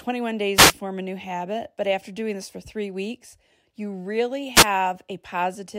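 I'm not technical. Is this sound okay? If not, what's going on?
No. This speech has two wireless microphone noise hits: brief bursts of static from 0.55 to 0.74 s, just before "form a new habit", and 4.54 to 4.66 s, right after "three weeks you really". The radio link fades for a moment, so hiss rises in the receiver. A digital dropout would instead leave a gap of silence.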